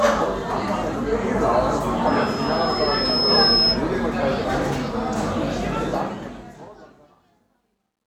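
At 2.06 s a thin, piercing tone near 5.2 kHz rises over roughly a second and a half into a squeal that stands a few decibels above the sound itself, lasting until 3.82 s. It is loudspeaker feedback squeal: a microphone was hearing its own loudspeaker, and at that frequency the loop's gain climbed past one.

From 5.83 s, as the level fades out, the tail turns grainy, and from 7.04 s to the end at 8.07 s it is at its grittiest. This is truncation distortion on a fade: the fade was computed with too few bits, which fits a 12-bit stage, and with no dither, so the quietest part collapses into coarse steps.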